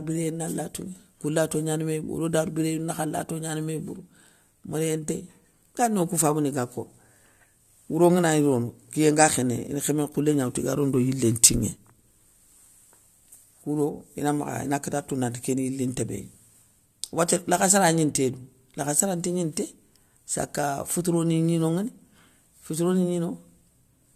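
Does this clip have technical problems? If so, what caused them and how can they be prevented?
No, this speech clip has no audible technical faults.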